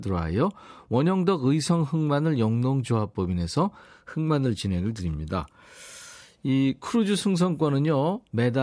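Speech, with no audible faults.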